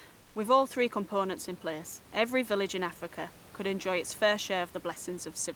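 Right near the start, from 0.21 to 0.35 s, there's comfort noise in place of the background: for about 140 ms the real room noise drops out and a smooth, featureless hiss stands in, sitting about 2 dB quieter than the surrounding background. The likely cause is Opus DTX, where the sender goes quiet during a pause and the receiver fills the gap with synthetic noise shaped to roughly match the room, so the detail of the actual background vanishes briefly.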